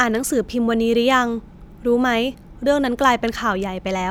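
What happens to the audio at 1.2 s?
Nothing goes wrong at 1.2 s: the speech carries on intact through that moment, with no dropout, click, distortion or other fault.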